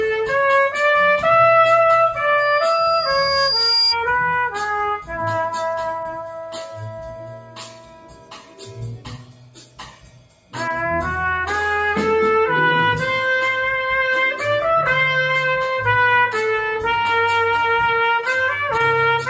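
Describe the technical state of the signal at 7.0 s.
At 7.0 s the signal sits inside a stretch, 6.27 to 8.78 s, where the sound is cut by the noise suppressor. The suppressor treats this passage as noise and pulls it down harder than its surroundings, by about 12 dB at the deepest point, so sustained and decaying parts sink and their tails are cut short.

That dip lies on top of a broader fault: a noise suppressor applied to music or sounds, active for the whole clip. Tuned for speech, it reads held tones, ambience and reverb as noise, attenuating them by varying amounts, a swing of roughly 10 dB. Attacks pass while sustains fade, so the level pumps and the texture thins. The call microphone processing removes the deepest bass and leaves nothing above 8 kHz, which is expected for that path.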